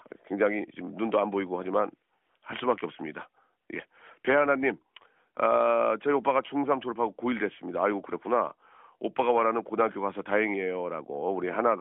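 No technical faults can be heard anywhere in this speech recording. It comes through an AMR narrowband mobile codec at 12.2 kbps, so the sound is confined to a telephone band of roughly 250 Hz to 3.4 kHz and carries only light codec colouring.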